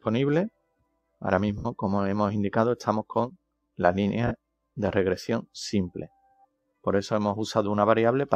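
A noise suppressor misjudged parts of this sound as noise and pulled them down harder than the rest. Between 0.50 and 1.21 s, about half a second of material sinks, by as much as about 18 dB at the deepest point. Between 6.25 and 6.85 s, a shorter stretch of roughly 150 ms dips by the same amount. Steady and decaying parts are hit hardest there, sagging in level or having their tails clipped early, while abrupt onsets still get through. Separately, lost LE Audio frames break the Bluetooth stream twice: 70 ms at 1.58 to 1.66 s and 40 ms at 4.27 to 4.31 s, which fits runs of about seven and four 10 ms LC3 frames. The decoder fills each gap by repeating the last spectrum with scrambled phase and fading it out, so anything tonal smears into a brief noisy wash that thins toward silence.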